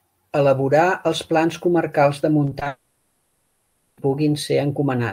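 From 2.45 to 2.67 s, repeated packet loss breaks the speech into pieces: four short gaps, none longer than 20 ms, are each patched by extending the preceding sound, so about 36% of that span is filler. The speech turns choppy.

From 2.67 to 3.99 s, a long network dropout likely cut off delivery for about 1.3 s. For that whole stretch, the last sound is stretched out in place of the missing speech rather than falling silent, until normal speech returns with that portion gone.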